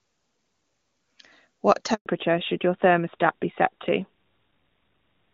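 At 1.94 s the speech cuts out in a handover gap. The call is being passed from one network link to another. No speech frames get through during the switch. The sound fades within a few tens of milliseconds. Then there is silence for 120 ms, until 2.06 s. Whatever was said in that gap is lost. It sounds like a brief, clean dropout rather than a crackle or glitch.

From 2.06 s to the end, the call shows a fallback to narrowband. Before the gap, the HD Voice path sounds clear, which fits AMR-WB at 23.85 kbit/s. After it, the link has dropped to an older narrowband codec, which fits AMR-NB at 12.2 kbit/s. Nothing above 4 kHz remains. The sibilants lose their crispness. The voice turns duller, more muffled and rougher. The change is abrupt and lasts to the end.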